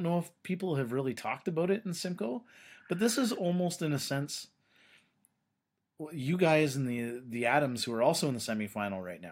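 Nothing here calls for comment, since the speech runs along without any technical faults turning up along the way.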